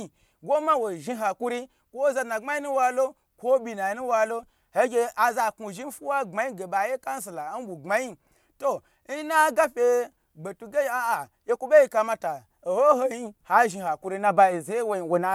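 No technical faults can be heard anywhere in this speech recording. There is nothing to mark at any point in the audio.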